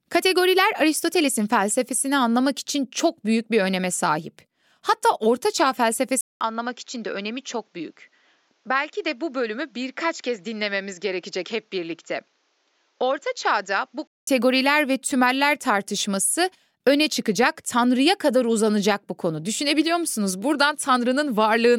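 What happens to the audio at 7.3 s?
Speech turns duller and quieter, with nothing above 7.6 kHz, from 6.21 to 14.27 s after a 200 ms gap: input likely switched to a poorer device.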